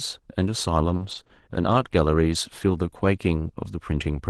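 Repeated packet loss (robotic sound) from 0.95 to 1.31 s: three short dropouts, the longest 40 ms, are patched by stretching the preceding speech, leaving choppy syllables.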